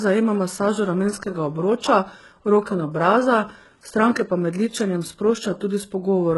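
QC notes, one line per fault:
Throughout, HE-AAC compression: likely a heavy encode near 12 kbps; treble is rebuilt from copied lower bands, so sibilants turn gritty, metallic; nothing above 11.5 kHz.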